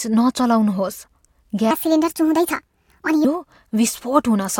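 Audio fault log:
1.71–3.25 s: section at the wrong speed. This stretch plays about 1.43 times too fast. Pitch rises with it, roughly seven semitones, so the speech turns high and hurried. Both snap back at 3.25 s. Likely cause: playback fitted to the wrong clock.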